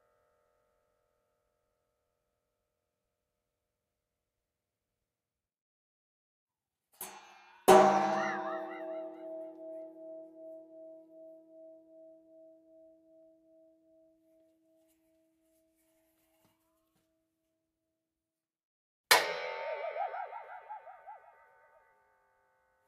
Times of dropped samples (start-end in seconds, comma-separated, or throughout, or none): 13.23